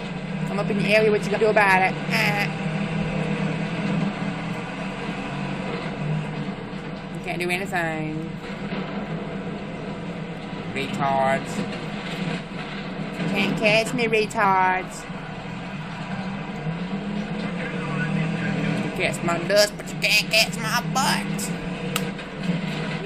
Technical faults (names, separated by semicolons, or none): compressed frames skipped